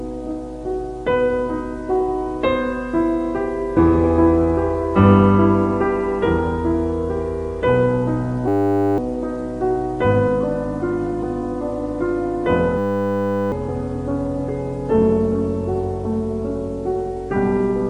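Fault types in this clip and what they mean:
System hang loop: the system stalled while the hardware kept replaying one 10 ms slice of its buffer, turning the sound into a steady 100 Hz buzz at 8.48–8.98 s and 12.78–13.52 s, losing about half a second, then about 0.7 s, of audio.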